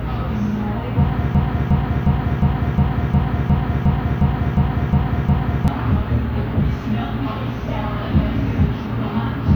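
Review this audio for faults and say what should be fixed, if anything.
From 1.35 s to 5.68 s a broken-record loop takes over: one 0.36 s fragment of the sound repeats exactly, back to back, twelve times, and the audio that belonged there is lost. Unlike an echo, each repeat is identical and never decays or overlaps fresh sound. The likely cause is a stalled player or stream resending its last held buffer. Prevent it by detecting stalls and muting or resynchronising rather than replaying stale data.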